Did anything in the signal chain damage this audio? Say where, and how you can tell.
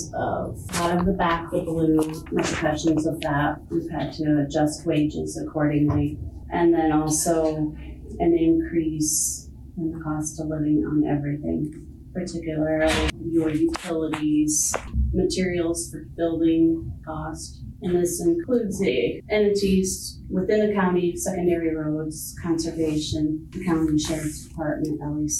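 No, nothing in the signal chain stood out as a problem on listening.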